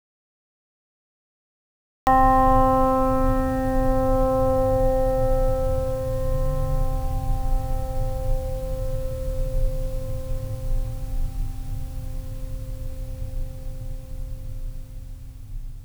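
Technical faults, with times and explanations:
0.0 to 2.07 s, audio dropout to silence: The music is absent from the very start and only arrives at 2.07 s, cutting in mid-flow rather than beginning cleanly. The gap is dead silence, with no room tone or hiss beneath it. That points to a lost input, likely a disconnected source or a mute, while the recorder kept writing silence. Whatever played during those first two seconds is gone.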